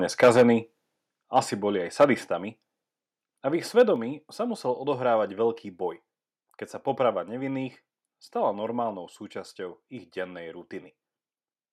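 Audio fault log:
0.22–0.43 s, 1.37–1.39 s, 2.00–2.05 s and 3.79–3.82 s, microphone overload: Speech peaks are flattened and sound harsh and crackly. The first burst runs about 8 dB over full scale, with around a tenth of its samples cut. The one right after "boli aj" is about 5 dB over. The events at 1.37 s and 3.79 s, the latter between "a v ich" and "sa musel odohrávať veľký", are about 2 dB over. The likely cause is input gain set too high, so the converter chops the peaks.
0.24 s, 1.23 s and 3.96 s, microphone volume stepped down: Voice and background drop abruptly in level, by 2 dB at 0.24 s and 4 dB at both 1.23 s and 3.96 s. The last drop falls between "a v ich" and "sa musel odohrávať veľký". Each drop arrives close to a distorted peak. The likely cause is call software reacting to clipping by cutting the device's input volume in one step, so the level falls instantly instead of easing down.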